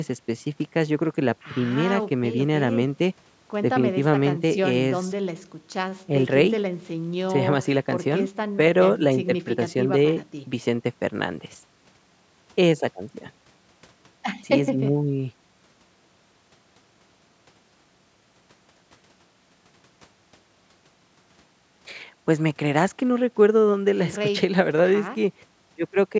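Nothing is technically wrong with this speech recording, which bears the ordinary marks of call microphone processing: its high-pass filter trims the lowest bass, and the audio carries nothing above 8 kHz.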